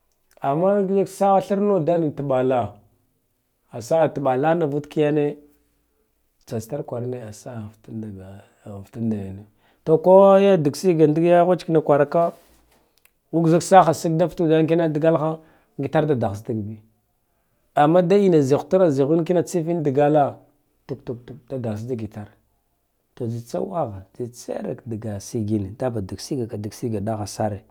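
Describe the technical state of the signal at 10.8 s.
At 10.8 s the speech signal is intact, with no dropout, clipping, glitch or other technical fault audible at that point.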